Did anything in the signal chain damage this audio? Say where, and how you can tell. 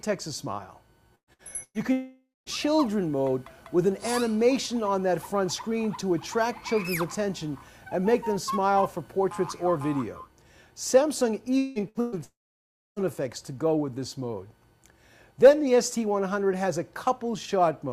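Yes. The network stage damaged it, in two clusters. Bursts of packet loss fall at 1.15 to 1.30 s, 1.33 to 1.42 s, 1.63 to 1.77 s, 11.89 to 11.98 s and 12.01 to 12.15 s. Each removes 60 or 120 ms of audio. The receiver extends the last sound and fades it, so each gap is a brief held buzz or hiss. In the first and third, that fill dies to silence before the audio jumps ahead.

Longer gaps at 1.92 to 2.49 s, 11.58 to 11.81 s and 12.24 to 12.99 s sound like a long network dropout, likely the cause. About 540, 180 and 720 ms of audio go missing. The concealment hiss or buzz fades and gives way to silence for the last 200 ms of the first gap and most of the third, about 640 ms. The middle gap stays filled throughout and runs slightly shorter than the audio it replaces.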